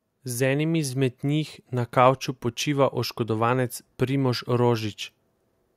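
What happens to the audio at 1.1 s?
At 1.1 s you're in the middle of an automatic gain rising event, running from about 0.26 to 2.01 s. The gain control decided the input was too quiet and pushed its level up by about 4 dB, so the speech and the background noise swell together over those couple of seconds.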